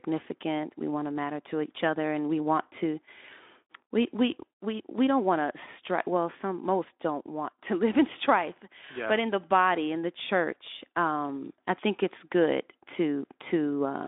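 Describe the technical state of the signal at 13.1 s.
At 13.1 s the speech is intact, with no fault at that moment.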